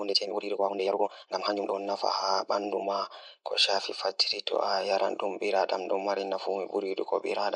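A rushed opening runs from 0.00 to 1.74 s of the speech, moving at about 1.86 times normal pace while the pitch stays put, then the pace drops abruptly to normal. This time-stretched section likely comes from software squeezing that stretch to fit a shorter length by dropping short pieces of audio.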